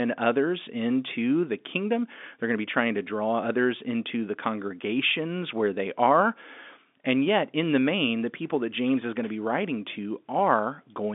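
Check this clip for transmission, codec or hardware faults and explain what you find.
No transmission faults detected.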